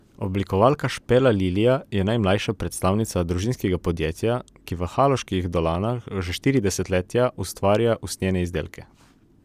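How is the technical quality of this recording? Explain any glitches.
Nothing in this recording jumps out as a glitch, so there's nothing here that needs explaining.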